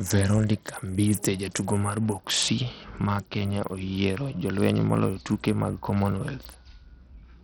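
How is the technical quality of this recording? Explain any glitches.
The recording is heavily degraded from start to finish. The treble flickers in and out, with a gritty, granular noise and aliasing riding on the speech. The damage is steady across the whole clip, not a momentary glitch.

This is likely Bluetooth SBC compression at a very tight setting, which fits roughly 64 kbps. SBC splits the signal into a few wide sub-bands and hands out bits with no model of hearing. Starved of bits, the upper bands lose detail or vanish from moment to moment, and coarse quantisation of the rest produces the grit.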